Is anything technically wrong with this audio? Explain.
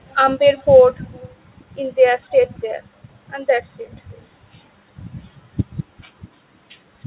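Yes. Faint echo leak appears at 0.08–0.16 s, 0.56–0.64 s, 1.03–1.3 s and 4.11–4.26 s: a delayed copy of the speech, about 229 ms late (about 284 ms at 4.11 s), roughly 30 to 35 dB down. Likely cause: a loudspeaker's residual echo escaping cancellation. On a spectrogram it shows as weak, time-shifted harmonic traces, capped at 4 kHz like the call audio, and as low ripples in the waveform trailing the main speech.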